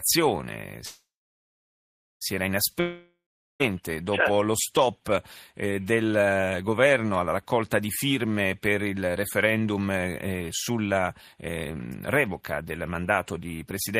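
From 0.85 to 2.23 s there is a call audio freeze. Packets were likely held up in transit, draining the jitter buffer, so the receiver stretched the last sound into a fading buzz, then about 1.14 s of silence. The speech then resumes where it stopped, with nothing lost but 1.36 s more delay.

From 2.80 to 3.62 s a long network dropout follows, likely because no audio reached the receiver for about 0.8 s. The last sound fades out as a brief buzz, roughly 0.4 s of silence follows, and the speech returns further on, with that 0.8 s gone for good.

Between 9.53 and 12.62 s, after "di firme per il" and before "mandato di", a jitter buffer speed-up occurs. The buffer held more audio than its target, so the receiver trimmed tiny pitch-period slices repeatedly, around 0.3 s in total. The speech runs at 109% speed with unchanged pitch and sounds hurried.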